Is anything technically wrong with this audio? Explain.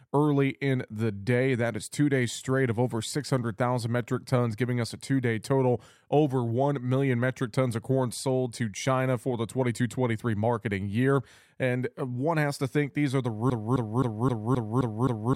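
Yes. From 13.50 s, right after "think these are the", a broken-record loop runs to the end: a 0.26 s fragment repeats exactly seven times, likely from a stalled player or stream resending its last buffer. The waveform and spectrogram show identical blocks tiled back to back.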